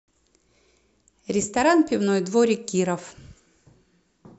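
No technical faults can be heard anywhere in this speech recording. There is nothing to point to at any moment in the audio.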